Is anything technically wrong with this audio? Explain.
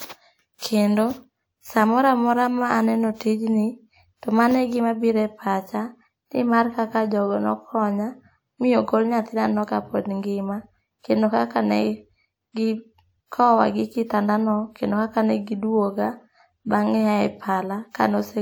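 Yes. From 13.26 to 13.32 s, a pre-echo spreads a short hiss across the 55 ms before a sharp speech onset, which then sounds blunted. The codec's block-wide quantisation noise, sized for the loud attack, leaks backward into the quiet gap, unlike reverberation, which trails after a sound.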